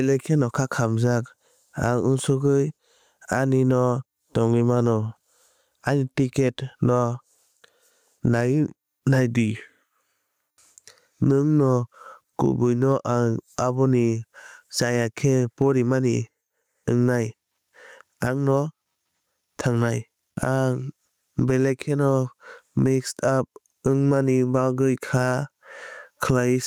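Input gain set far too high for the microphone, with a fast limiter or compressor clamping down on every loud syllable, is the likely cause of the gain pumping that runs through the whole recording. The level swings by roughly 15 dB. The result is speech with flattened dynamics, loud and quiet passages pressed close together, and a squashed quality.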